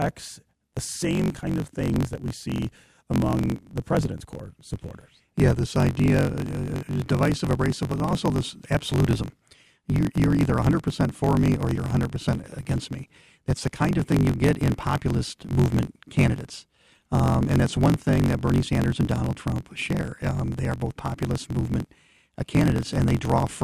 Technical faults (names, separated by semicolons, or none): block size mismatch (truncated)